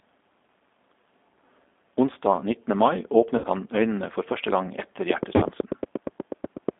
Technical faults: G.729 codec; VoIP packet loss concealed by the speech codec; train of clicks

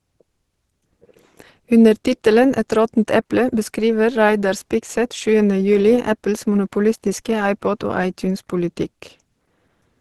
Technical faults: Opus compression

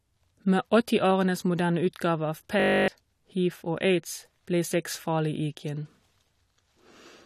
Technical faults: system hang loop

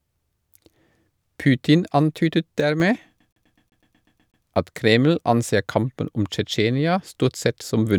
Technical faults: sudden gain jump; CD stuck on one turn

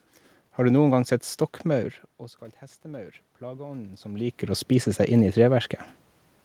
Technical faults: automatic gain rising

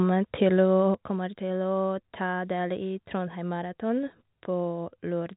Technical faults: sudden gain jump

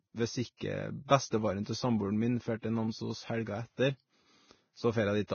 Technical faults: Vorbis compression; pre-echo

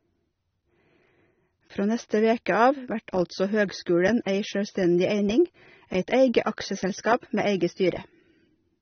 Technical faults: AAC compression; pre-echo

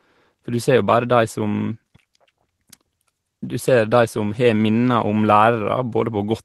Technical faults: none

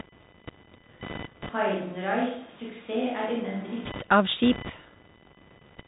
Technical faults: computer activity noise; Bluetooth CVSD headset codec; switch to a distant microphone

